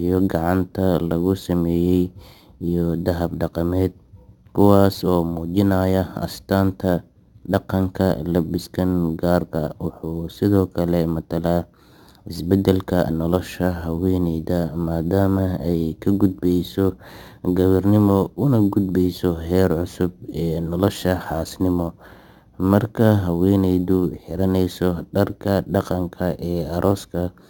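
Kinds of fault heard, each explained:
Imaging from sample-and-hold upsampling: Each sample was held with no smoothing filter, which fits a 16 kHz source. A mirrored speech spectrum fills 8 to 16 kHz, about 27 dB down. It sounds like a metallic fizz following the speech level.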